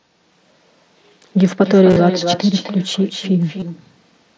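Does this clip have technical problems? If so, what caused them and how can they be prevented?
Yes. Echo with no canceller runs throughout: the far end's loudspeaker feeds its open microphone, so your speech returns roughly 300 ms later, about 10 dB quieter and thinner. Having them use a headset or enable echo cancellation prevents it.

Concealed Bluetooth headset packet loss hits at 1.90 to 1.96 s, with a buzzy 30 ms stretch, and at 3.60 to 3.62 s, where the receiver filled gaps by repeating recent waveform. Keeping the headset near the phone and away from interference prevents it.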